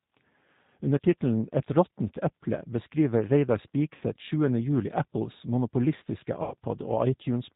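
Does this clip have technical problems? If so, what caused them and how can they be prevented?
Yes. Throughout, the speech carries G.729 codec damage, plainly audible. Nothing above 4 kHz survives, so the sound is band-limited and slightly rough and synthetic. This fits the 8 kbit/s G.729A variant, which models each 10 ms frame with a vocal tract filter, a pitch predictor and a few fixed pulses rather than the actual waveform. Prevention: carry the call on a wideband codec such as G.722 or Opus when the bandwidth allows.

There is also VoIP packet loss concealed by the speech codec, at 3.95 to 4.03 s and at 6.43 to 6.54 s. About 60 ms of audio is missing in the first gap and 90 ms in the second, which fits two and then three lost 30 ms packets. The decoder filled each hole by repeating its last pitch and filter with falling gain, giving a short buzzy tone or coloured noise that fades. Because each frame is predicted from the one before, the speech stays weak or distorted for tens of milliseconds or more after each gap. 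Prevention: reduce network loss with QoS prioritisation and a properly sized jitter buffer, or add forward error correction or redundant packets.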